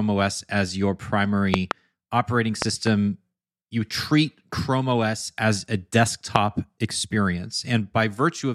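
Loud pops, likely voltage spikes, hit about 20 dB over the speech: doubled at 1.54–1.73 s after "as your" and 2.62–2.89 s, single at 6.36–6.38 s.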